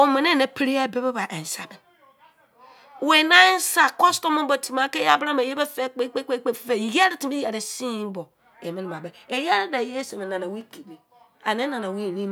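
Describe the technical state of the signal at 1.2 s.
At 1.2 s the signal is intact, with no audible fault at that moment.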